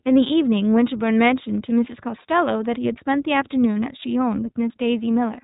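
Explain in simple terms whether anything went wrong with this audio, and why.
From start to finish the speech sounds muffled and a little rough, with a slightly synthetic, buzzy edge that is easy to hear. The cause is the iLBC codec, a phone-style voice compressor used for internet calls. It chops the sound into 20 ms slices and squeezes each slice on its own, discarding everything above 4 kHz. That loses the crisp top of the sound and leaves the grainy texture.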